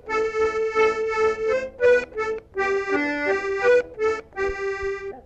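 No technical faults can be heard anywhere in this audio.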